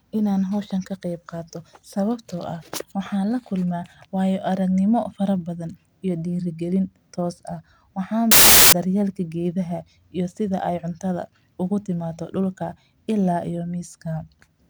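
From 8.31 to 8.73 s, samples built from the wrong bytes. Misassembled bytes turn the speech into loud, harsh broadband noise, just before "dar yeel".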